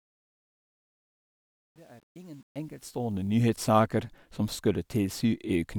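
It's a speech clip that opens on a fade-in, and that fade carries truncation distortion from the start to about 3.47 s, where it reaches full level. The worst of it runs from the start to about 2.92 s. The quiet part turns gritty, because the gain stage is rounding to coarse steps without dither. The stepping sounds like roughly a 9-bit path.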